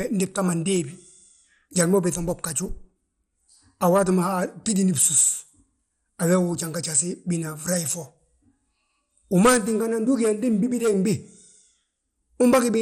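Throughout the speech the sound is dull and plainly gurgling, with a granular roughness and nothing above 16.5 kHz. The likely cause is MP2 compression at a low rate, such as 64 kbps, starving upper sub-bands of bits so they drop out or are coarsely quantised.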